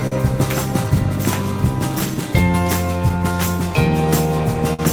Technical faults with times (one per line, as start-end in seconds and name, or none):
0.00-4.93 clock drift between sender and receiver
0.00-4.11 repeated timing corrections
0.07-0.13 short stall from a late packet
4.74-4.80 short stall from a late packet